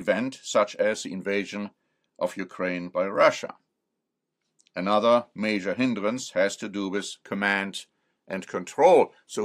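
Speech recording with no technical faults to report. Nothing in the audio calls for a time mark or a cause.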